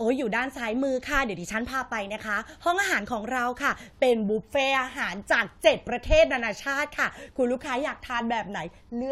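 Nothing goes wrong anywhere in this stretch of speech, so there's no fault to point to at any moment.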